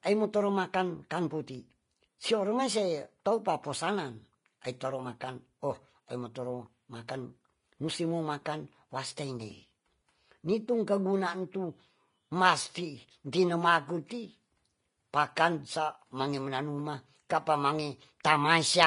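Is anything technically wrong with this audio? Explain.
Yes. Throughout the speech the treble stops at 10.5 kHz and the upper band is hissy and grainy, most likely from Vorbis compression at a low setting, fitting roughly 31 kbps, where detail is quantised so coarsely it turns into noise.

At 1.10 s, between "aimoto rumakang" and "puti soroimase topaposanan", a pre-echo occurs. The codec spread quantisation noise across a transform block, so noise meant for a sharp attack leaks into the quiet before it: an 11 ms hiss precedes a softened onset.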